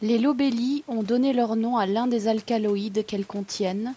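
Speech recorded through a call's microphone processing carries no technical faults, with the lowest bass trimmed by that processing's high-pass filter as expected and nothing present above 8 kHz.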